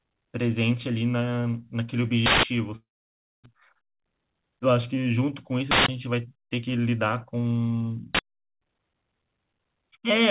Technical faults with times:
2.26-2.43 uninitialised buffer
2.76-3.48 long network dropout
3.56-4.35 jitter buffer speed-up
5.71-5.88 uninitialised buffer
8.15-8.19 uninitialised buffer

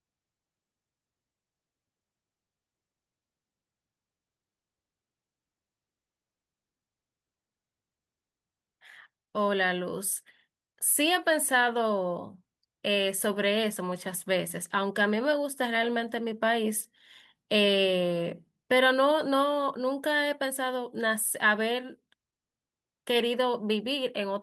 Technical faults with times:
none

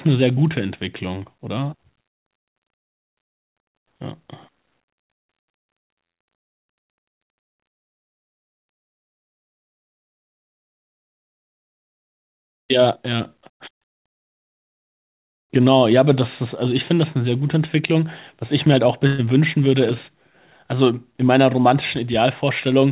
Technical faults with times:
6.04-6.22 long network dropout
19.07-19.21 burst of packet loss

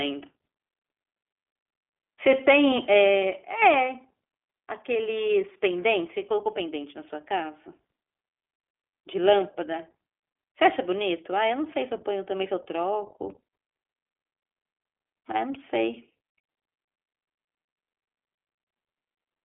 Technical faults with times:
0.00-19.45 iLBC codec

